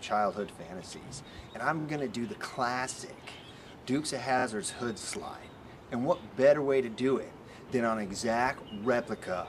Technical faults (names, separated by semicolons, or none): repeated frames